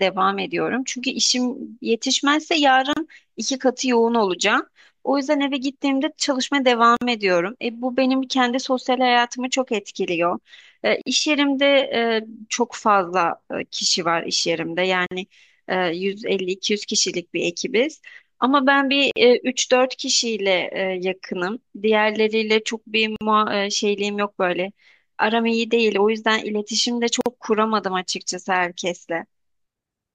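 Gaps at joins of encoded pieces, every 4 s (2.93, 6.97, 11.01, 15.06, 19.11, 23.16, 27.21 s): leftover encoder padding silences the speech for 33 ms, then 49 ms, showing as flat-line dropouts and blank vertical spectrogram strips.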